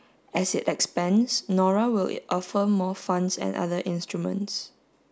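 A short bit of speech, and there's nothing technically wrong to point to anywhere in it.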